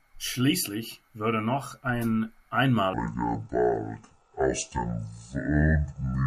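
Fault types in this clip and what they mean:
Section at the wrong speed, 2.93 s to the end at 6.26 s: the speech abruptly slows to about 0.61 times its recorded rate, dropping roughly ten semitones so voices turn deep and dragging, likely from that stretch being played against the wrong clock.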